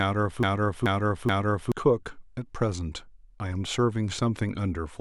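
From the very start until 1.72 s, a broken-record loop is already under way: the same 0.43 s fragment of speech repeats exactly, three times back to back, most likely because playback or the stream stalled and kept resending its last buffer. The material that should have filled that span is lost. Unlike an echo, each repeat is identical and undecayed.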